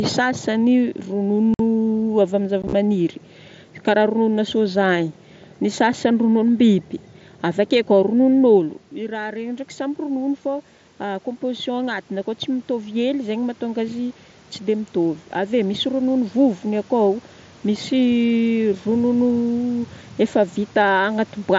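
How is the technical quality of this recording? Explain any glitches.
The recording has two kinds of fault: brief Bluetooth dropouts early on and a slow gain swell in the middle. It passes through the mSBC headset codec, which limits the audio to 8 kHz.

Unconcealed Bluetooth headset packet loss occurs at 1.54 to 1.60 s, a clean 52 ms hole, and at 2.62 to 2.73 s, where 45 ms is lost in runs of up to 15 ms spread over about 105 ms. Lost voice packets are replaced with silence, so the edges are abrupt and can click. The second event sounds chopped rather than like a single gap. Concealed loss would be smoothed over instead.

Automatic gain rising runs from 8.95 to 17.93 s, just after "koa rononon'olo". The talker moved back around 8.5 s and the input fell about 11 dB. The gain control then lifted the level about 10 dB over several seconds. The room noise swells along with the voice, which a talker simply moving closer would not cause.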